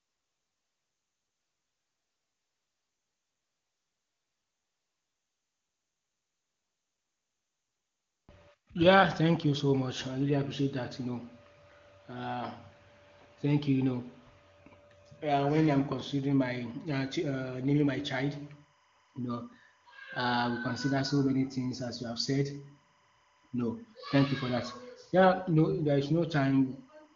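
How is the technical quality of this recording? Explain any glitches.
From 17.85 s, just after "uh naming", a faint chirping warble enters behind the speech and continues to the end at 27.16 s. It sits about 40 dB below the speech and flips between two pitches near 1 kHz and 2 kHz. This is timecode bleed. Linear timecode, a square wave that carries position data as alternating pitches, has leaked in from a neighbouring track or cable. Its steady rhythm fits 25 frame-per-second code. The speech passes through an AMR wideband (HD Voice) link, and any coding damage is faint at most.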